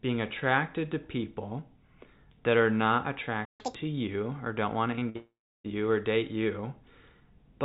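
At 3.45 s the speech cuts out for about 145 ms, a playback stall that likely came from the player running dry. On the waveform it is a flat gap, and on the spectrogram a blank vertical band.

From 3.60 to 3.75 s comes catch-up at higher speed. The backlog plays at double speed, and the pitch jumps about 10 semitones. Harmonics on the spectrogram spread apart and rise, then snap back down.

At 4.96 and 4.99 s there are two short concealed packet losses, each covering about 20 ms of missing audio. They are heard as a brief smear, visible as slightly blurred frames.

Between 5.09 and 5.16 s a burst of packet loss drops about 60 ms. The last sound is stretched out and fades, showing as a flat, fading smear.

It runs straight into a long network dropout, probably lost packets, from 5.16 to 5.66 s, with about 480 ms missing. The concealment fades out, and roughly 330 ms of silence follows before speech resumes further on. 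The spectrogram shows a fading smear and then an empty gap.

Throughout the clip, nothing appears above 4 kHz, which fits a narrowband telephone codec on the call path.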